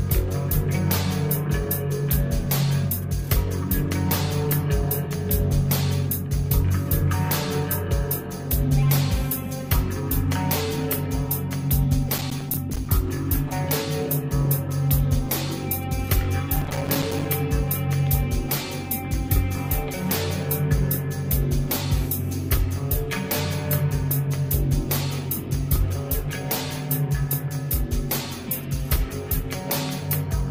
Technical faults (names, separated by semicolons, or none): processor overload crackle